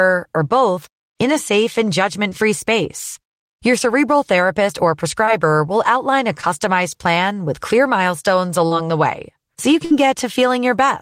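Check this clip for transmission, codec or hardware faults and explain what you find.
The clip has two transmission faults, both from lost packets on a speech call.

Short concealed packet loss occurs at 2.29, 5.25 (after "cerebral therapist or"), 6.41 (just before "plan with clear milestones") and 8.67 s. Each time, 20 ms of audio failed to arrive, 40 ms at 8.67 s. The receiver extended the preceding sound to bridge the hole, leaving a brief smear or wobble.

A burst of packet loss runs from 9.85 to 9.92 s, right after "way so you". About 60 ms went missing in a row. Concealment stretched the last sound into a short buzz or hiss, then playback resumed with that stretch of speech gone.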